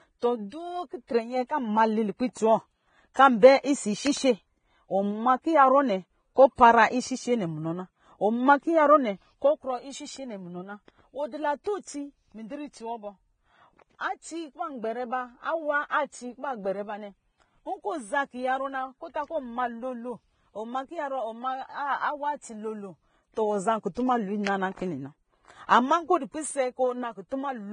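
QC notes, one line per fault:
Throughout: Vorbis compression. The speech is hissy and grainy, with roughened tones and softened consonant onsets, and nothing is present above 9.7 kHz. This is likely low-quality Vorbis encoding, with damage heavy enough to suggest a bitrate around 20 kbps. The treble residue is quantised so coarsely that fine detail turns into noise of similar energy. Plain band-limiting would sound dull but clean. Here the remaining upper band is also granular.
1.07–1.09 s and 11.64–11.66 s: pre-echo. At each point a brief hiss of about 20 ms leads into a sharp attack, which sounds smeared rather than crisp. The transform block containing the attack spreads its quantisation noise, sized for the loud onset, back across the quiet moment before it. This differs from a click or dropout because the noise comes before the transient, lasts only one block, and is shaped like the codec's hiss.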